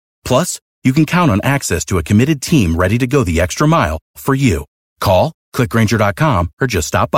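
No technical faults can be heard anywhere in the speech.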